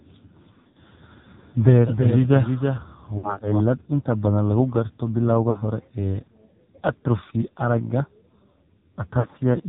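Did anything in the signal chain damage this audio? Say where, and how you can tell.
Yes, the codec stage did. The speech is dull and boxed in, with nothing above 4 kHz, and it has a buzzy, synthetic edge throughout. That heavy damage points to AMR narrowband mobile coding at a low mode, around 5.9 kbps, rebuilding the voice from a sparse vocal-tract model.

The network stage did too. The sound smears, warbles and sags in level at 0.54 to 0.77 s, 3.18 to 3.42 s, 5.50 to 5.63 s just after "badan lagu garto bilowga", and 9.20 to 9.27 s. These are lost AMR speech frames. The decoder filled each gap by repeating the last good settings at falling gain.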